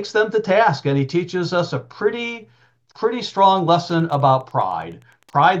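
From 3.38 s to the end, a faint, steady ticking runs under the sound about ten times a second, roughly 40 dB below it. This is Wi-Fi interference: a nearby radio's beacon, repeating every 102.4 ms, is being rectified by the audio circuitry.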